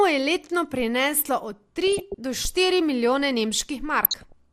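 A short speech clip, dull throughout with a granular, gurgling grain where upper bands flicker in and out, likely MP2 compression at a low rate that fits around 80 kbps. Unlike random transmission damage, this coarseness is steady and evenly spread. DAB burbling breaks in at 1.87–2.15 s and again at 4.02–4.32 s. Short blips of noise appear in single sub-bands, pointing to bit errors of roughly half a percent or less slipping past error correction.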